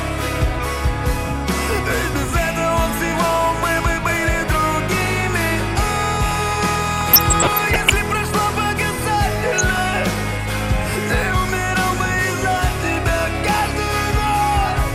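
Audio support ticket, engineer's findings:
Dull, band-limited sound with granular gurgle throughout; likely MP2 compression at a low rate, around 80 kbps by ear. Upper sub-bands starved of bits drop out and flicker. Steady and always present, unlike burbling, which comes in bursts.

DAB burbling at 6.95–7.91 s and 9.40–9.80 s: short noise blips in single sub-bands over the programme. Residual bit errors in the MP2 stream corrupt sample data, putting noise into single sub-bands. Error rate roughly 0.5% and 0.3%. Burst-limited, not constant codec coarseness.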